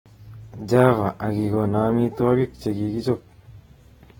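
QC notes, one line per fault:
Throughout: AAC compression. The speech has a plainly audible smeared, warbling texture, with sibilants turning fizzy rather than crisp. This likely comes from AAC-LC coding at a low bitrate, which fits a rate of roughly 27 kbps. At that rate the encoder quantises each frame's spectral lines too coarsely against its hearing model, so fine detail shifts from frame to frame. Nothing is present above 19.4 kHz.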